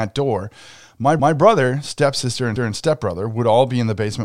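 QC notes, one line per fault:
1.20–1.37 s (after "door my") and 2.56–2.73 s (after "stepsister and"), repeated buffer: a 0.17 s chunk, which fits an 8192-sample buffer, plays twice with hard joins. It is an audible stutter, not a gap or skip, since no audio goes missing.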